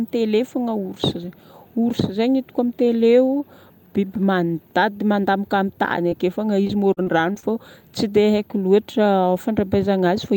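At 6.09 to 6.13 s, a short concealed packet loss: about 20 ms of the speech stream failed to reach the decoder in time, and the receiver bridged the hole by extending the preceding sound for roughly 17 ms before blending back into the real signal. The patch is brief, so it comes across as a small smear or wobble in the speech.

From 6.67 to 7.45 s comes repeated packet loss with a robotic sound. The decoder was starved again and again, in what sounds like five separate dropouts. The longest is about 39 ms, and together they leave about 140 ms missing. Each gap is filled by continuing the last sound, covering roughly a sixth of the stretch. Because the patches follow one another closely, the speech turns choppy, with fragments audibly absent.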